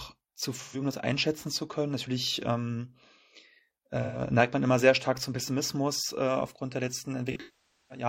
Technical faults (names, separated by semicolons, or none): AAC frame loss with concealment